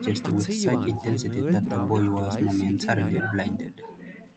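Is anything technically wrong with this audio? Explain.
No, nothing technically wrong stood out on listening to this speech clip, which sounds as expected for audio carried over a normal call connection.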